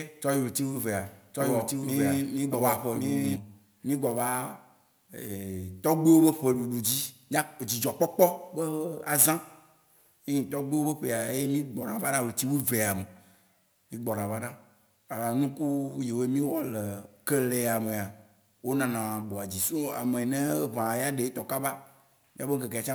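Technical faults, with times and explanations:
0.00 to 3.36 s, doubled audio track: from the start, a dry copy of the speech trails about a second behind, equally loud. It cuts off abruptly, likely from a slower second capture path.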